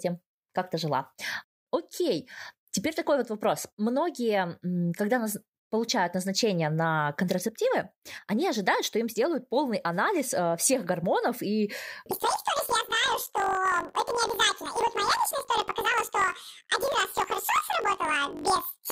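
From 12.11 s right through to the end, the speech jumps up an octave and picks up a fast flutter. That's planar audio read as interleaved. The stream stores each block as all its left samples followed by all its right samples, but the reader treats them as alternating left-right pairs. Each block of about 21.3 ms, which fits a 1024-sample block, plays twice at double speed, first the left half and then the right. The pace holds, but the pitch doubles and chops at around 47 Hz.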